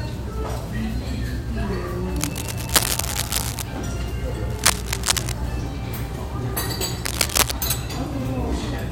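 A worn cable, connector or control being moved is the likely cause here: its contact resistance shifts rapidly, injecting dense, irregular noise bursts. This cable scratch noise first appears from 2.16 to 3.63 s at roughly the level of the sound itself, then from 4.50 to 5.32 s and from 7.05 to 7.54 s, somewhat louder than the sound. Each stretch is heard as scratching or rustling laid over the audio.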